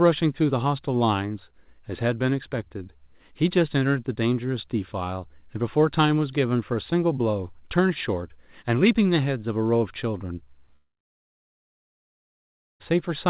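A speech recording, heard through a narrowband call path with nothing above 4 kHz, which fits G.711 mu-law at 64 kbps. From 10.76 s to 12.82 s the audio breaks off: the last sound briefly carries on as a fading buzz, then about 1.9 s of silence follows before speech resumes with roughly 2 s of material simply gone. This is likely a long network dropout, where packets stopped arriving and the receiver concealed the gap until it had nothing left to extend.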